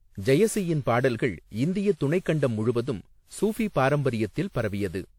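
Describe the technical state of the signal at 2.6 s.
At 2.6 s, as across the whole clip, the speech shows generation loss, likely from around ten rounds of lossy re-encoding, consistent with a WMA chain near 96 kbit/s. Each pass requantised on a shifted frame grid, so the audio sounds swirly, hollow and smeared, with blurred attacks and nothing above 18.7 kHz.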